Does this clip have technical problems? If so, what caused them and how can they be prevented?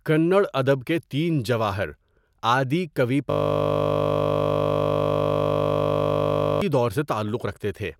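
Yes. From 3.3 s to 6.6 s the speech gives way to a steady buzz: a system hang loop. The computer or its audio driver stopped delivering new samples while the sound hardware kept replaying the same 20 ms stretch of its ring buffer, over a hundred and sixty times, so the repetition rate of 50 Hz becomes the pitch. A waveform shows identical 20 ms cycles, and a spectrogram shows flat horizontal lines at 50 Hz and its multiples. Prevention requires keeping the audio thread at high priority and having the driver output silence when it is starved.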